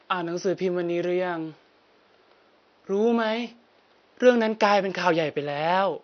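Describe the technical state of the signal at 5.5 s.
At 5.5 s the speech carries plainly audible low-delay AAC compression, present through the whole clip and likely from AAC-ELD at a bitrate around 32 kbps. Its short frames resolve pitch harmonics poorly, so the sound turns rough and grainy, with noise filling the gaps between harmonics and a dulled top band. Unlike packet loss, the damage is continuous rather than gapped. The faint room noise, about 39 dB below the speech, is separate.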